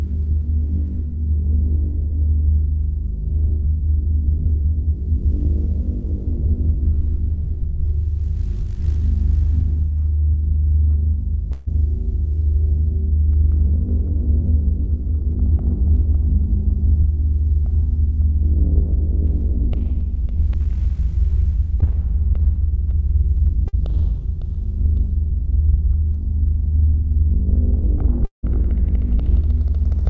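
Audio carried over a call link, with nothing above 8 kHz, which fits a wideband G.722 codec at 64 kbps. Four gaps are audible. Two are bursts of packet loss, at 11.52 to 11.68 s and 23.68 to 23.75 s. In each, several packets went missing in a row. The receiver stretched the last sound and let it fade, for about 146 ms and then 51 ms. When the audio resumes, roughly 140 ms and 60 ms of material are gone. The result is a held buzz or fading hiss, then a jump forward.

At 21.80 to 21.84 s there is a short concealed packet loss. Only about 20 ms failed to arrive. The receiver patched it with about 14 ms of extended sound and blended back in. It is heard as a brief smear or wobble. A short sound there may be lost.

At 28.25 to 28.45 s the sound is continued as a fading buzz or hiss for about 178 ms. Within that, about 120 ms is silence before the audio returns. Around 180 ms of material never plays. 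This pattern points to a long network dropout as the likely cause. The link stopped delivering audio long enough for the concealment to run out.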